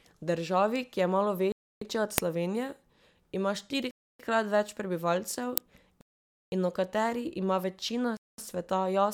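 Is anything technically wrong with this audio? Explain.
Yes, there are three kinds of fault in this speech.

At 0.76 s there's an electrical switching spike, a sharp snap or tight cluster of clicks sitting on top of the speech. It's most likely a nearby switch or motor arcing, with the audio line picking up that brief discharge.

There are four Bluetooth stalls, at 1.52–1.81 s (right after "je malo"), 3.91–4.20 s, 6.01–6.52 s (speech resumes with "in o"), and 8.17–8.38 s. Each one drops to silence for roughly 0.21 to 0.51 s, then carries on. The likely cause is interference delaying packets until the headphone buffer empties.

Two uninitialised buffer bursts land at 2.18 s and 5.58 s, the second just before "in o". Each is a loud crack about 0.67 ms long, which fits a 32-sample block played before any audio was written into it.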